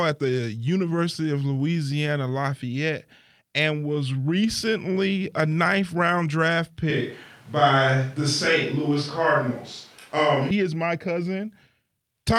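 At 6.90 s the speech turns suddenly roomy and hollow, with thinner bass. The level stays roughly the same. A faint background noise appears well below the speech. This is likely a switch to a distant microphone that hears more of the room. The close sound returns abruptly at 10.51 s.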